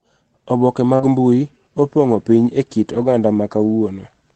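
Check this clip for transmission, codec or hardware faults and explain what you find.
Two kinds of packet-loss fault are audible, one concealed and the others rebuilt from error correction, over a call path whose Opus coding limits the audio to about 8 kHz.

Short concealed packet loss occurs from 0.95 to 1.01 s, where about 40 ms of audio never arrived in time. The decoder covered the hole by extending the sound that came before it and then blended back into real audio. You hear a brief smear or wobble. Unlike the rebuilt frames, this stretch carries no actual content from the missing moment, only a guess continued from the previous sound.

A lost packet rebuilt from error correction overlaps it, from 0.99 to 1.09 s, covering 60 ms, and occurs again from 2.93 to 3.07 s, covering 80 ms. Each rebuilt section fits several separate packets whose lost audio was recovered from the low-bitrate copies carried by the packets that followed them. 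Because the decoder played those copies, there is no gap. The sound simply turns rougher and noisier for a moment. This separates it from concealment: the real sound is still there, only at lower fidelity.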